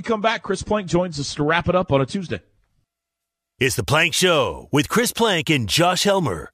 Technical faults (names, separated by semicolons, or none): none